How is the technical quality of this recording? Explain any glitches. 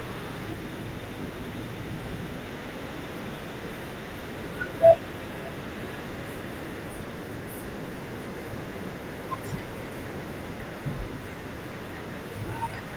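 The recording is in good technical shape with no glitches to explain: it has passed through Opus voice compression at 24 kbps, which keeps the full band up to 20.2 kHz and leaves only light coding traces on the speech.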